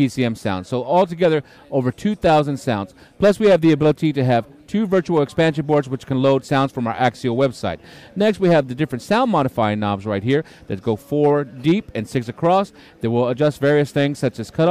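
A rough crackle rides on the loudest moments from start to finish, with peaks that sound splintered and edged with fuzz rather than full. This is hard clipping: the signal was driven about 8 dB beyond what a stage in the chain could pass, so its peaks were sliced flat. Only a small share of the samples, around one or two percent, hit that ceiling, but each flattened top sprays harmonics high into the spectrum.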